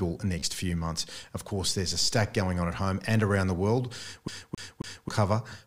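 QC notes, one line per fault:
0.40–0.43 s: Bluetooth stutter just before "few months". About 29 ms of sound missing, filled by a replayed buffer slice. Fits roughly two lost packets.
4.28–5.09 s: CD stuck on one turn. A 0.27 s segment plays three times, with a brief mute at each jump back, giving an even skipping stutter.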